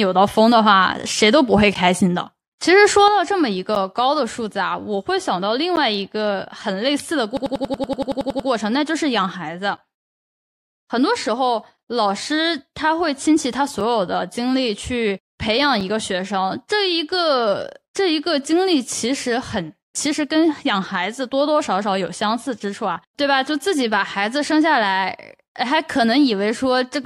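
At 3.08 s the level drops by about 6 dB and stays down to the end. That's the classic sign of one channel dropping out: a stereo channel has likely gone dead, so the mono sum keeps only half of whatever both sides shared.

There's a gap between stream segments at 3.75 s and again at 5.76 s, exactly 2 s apart. Each is a hard-edged silent hole, about 9.8 ms and 11.2 ms long. The segment timestamps didn't quite butt up, so the player padded the space with silence and nothing was lost.

From 7.37 to 8.49 s there's a system hang loop. A 92.88 ms slice repeats 12 times at 10.8 Hz, which comes across as a machine-gun stutter. The machine stalled while the hardware kept cycling its ring buffer, which fits a 4096-sample buffer, and hardly any audio actually went missing.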